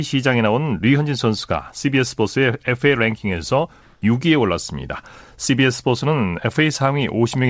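A speech clip. From 3.82 to 4.02 s, a 200 ms pause, the real background is replaced by steady, featureless hiss. Its level shifts by about 4 dB. This is comfort noise in place of the background, likely from discontinuous transmission filling silence with synthetic noise. The call path's codec leaves nothing above 8 kHz.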